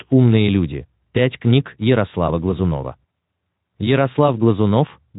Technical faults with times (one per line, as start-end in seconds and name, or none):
none